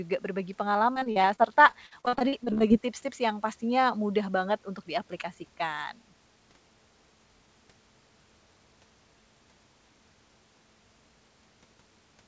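From about 0.94 to 2.72 s there's repeated packet loss, the robotic kind: a steady run of short dropouts, none longer than about 42 ms, each patched by stretching the previous sound. Roughly a quarter of that stretch is filler, so the speech turns choppy, all through a call path whose band stops at 8 kHz.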